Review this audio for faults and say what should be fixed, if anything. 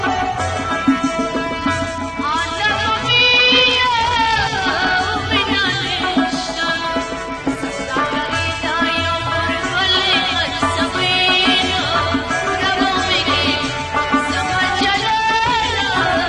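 Bluetooth SBC bit pool drop at 1.58–5.08 s, 7.18–8.81 s and 14.65–15.52 s: the treble dulls and gritty noise rises, which fits the encoder cutting its bit pool from around 28 to 11, roughly 90 kbps. This starves the upper sub-bands and coarsens the rest. On a spectrogram the top band goes dark in those spans, with grainy noise speckling the remaining bands. Moving the phone closer or reducing 2.4 GHz congestion keeps the link stable, so the bit pool never has to fall.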